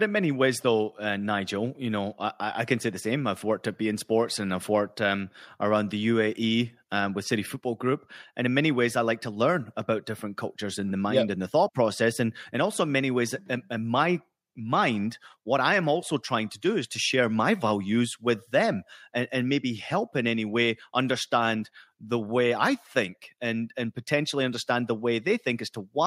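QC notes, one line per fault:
Nothing to flag on this speech recording; no problems turned up anywhere in it.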